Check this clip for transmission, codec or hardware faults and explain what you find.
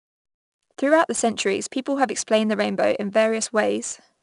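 One codec fault runs through the whole speech clip. 4-bit ADPCM compression throughout: coarse 4-bit prediction steps leave level-following gritty hiss, with nothing above 10.6 kHz, which fits roughly 89 kbps at a low sample rate.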